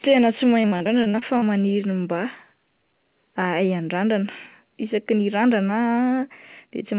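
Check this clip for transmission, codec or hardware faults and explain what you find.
One transmission fault shows up: a burst of repeated packet loss (robotic sound) from 0.62 to 1.44 s. Over that stretch the audio drops out about nine times, with the longest hole around 42 ms. Each gap gets patched by stretching the last bit of sound forward, so close to a third of the span is filler. The speech turns choppy there. The narrow band, with nothing above 4 kHz, fits a G.711 call path.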